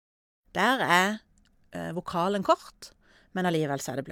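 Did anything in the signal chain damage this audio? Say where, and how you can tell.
No, nothing in the signal chain has damaged this speech recording. The opening has a smooth fade-in, as an editor would apply it, with the level reaching full by about 0.48 s.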